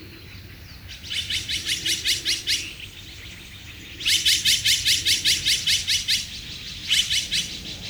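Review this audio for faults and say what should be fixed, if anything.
Nothing here needs fixing, since the signal holds steady and intact throughout with no audible technical fault.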